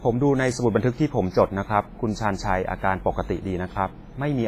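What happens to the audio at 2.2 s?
At 2.2 s the speech is still under the coding damage that runs through the whole clip, likely WMA compression at a low bitrate, around 24 kbps. Long transform blocks spread quantisation noise across tens of milliseconds, so the speech rings and sounds washy, with hiss breathing alongside it and nothing above 15.5 kHz.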